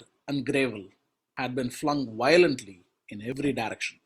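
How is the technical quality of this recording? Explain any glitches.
The recording has two dropouts where compressed frames were skipped, at 1.37 to 1.47 s and again at 3.32 to 3.51 s. In each case whole frames of the encoded stream never reached the output, either lost from the file or rejected by the decoder as corrupt. The speech jumps forward by roughly a tenth of a second, losing a short stretch of sound.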